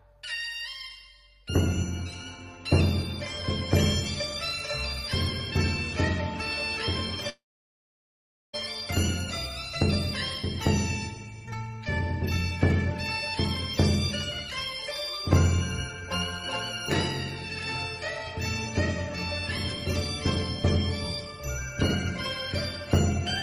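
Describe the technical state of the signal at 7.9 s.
At 7.9 s the signal sits inside a long network dropout running from about 7.29 s to 8.55 s, most likely a stretch where no audio data reached the receiver. The receiver briefly carried the last sound forward as a fading buzz, then gave way to silence for about 1.1 s, so 7.9 s falls in that dead gap. The audio resumes near 8.55 s with roughly 1.2 s of material simply gone.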